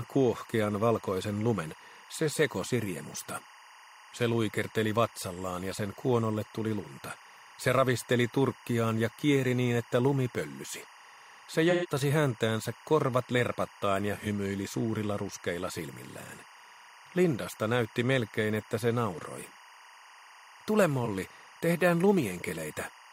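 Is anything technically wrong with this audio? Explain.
Yes. Linear timecode at 23.976 frames per second is leaking in from a neighbouring line, adding a steady chirping warble near 1 and 2 kHz, roughly 25 dB below the sound, throughout.

AAC frame loss with concealment occurs at 11.70–11.87 s (128 ms, which points to three lost frames), and at 14.21 s and 21.05 s (about 43 ms each, fitting single frames). The decoder patched each gap from the last good spectrum, leaving brief smeared, noisy, phasey patches.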